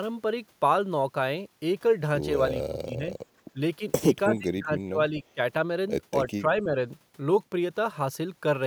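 Speech suppressed in double talk at 2.54–3.16, 3.53–3.59, 4.28–5.39 and 6.25–6.80 s: the speech dips, most deeply near 4.3–5.4 s, likely an echo canceller turning down its own talker along with the loudspeaker echo.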